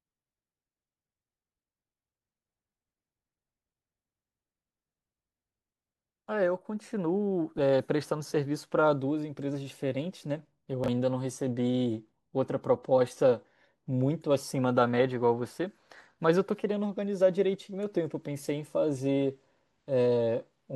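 At 10.84 to 10.88 s there's a brief case of chunks out of order. A 20 ms slice of the speech turned up one chunk late, so it plays after the piece that should have followed it, and those two swap places. Nothing's actually missing, but the shuffle leaves three hard joins packed into about 40 ms, and you hear a quick jumbled stutter right at that spot.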